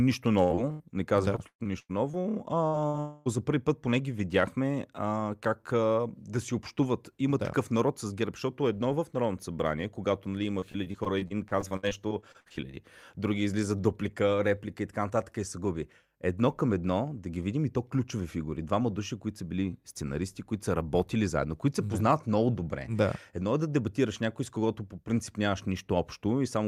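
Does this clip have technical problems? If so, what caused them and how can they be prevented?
Yes. Repeated packet loss (robotic sound) occurs twice: the network repeatedly failed to deliver audio packets on time, and the receiver patched each hole by extending the last sound. From 0.43 to 3.28 s there are 10 gaps, about 0.56 s missing in total and the longest 118 ms, so roughly a fifth of that stretch is concealment. It ends just before "за първи път поне". From 10.60 to 12.75 s, after "събрание когато нали има" and before "други излизат дуплика реплика", there are 19 shorter gaps (longest 63 ms, about 0.44 s missing). The sound is choppy, with pieces absent. A wired or more stable connection, plus a larger jitter buffer or forward error correction, would prevent this.

From 3.00 to 3.29 s a long network dropout is the likely cause: the last sound is stretched into a fading buzz or hiss for about 0.26 s with no silence, and the audio resumes at "за първи път поне" with that stretch lost. 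Avoiding congested or weak links, and using redundancy or retransmission where latency allows, would prevent it.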